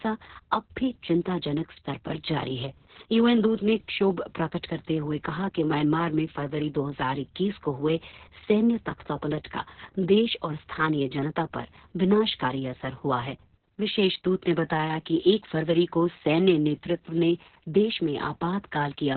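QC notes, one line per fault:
throughout: Opus voice compression. Nothing survives above 4.3 kHz, so speech sounds muffled. Heavy, coarse coding, consistent with roughly 6 kbps, makes it hoarse and robotic.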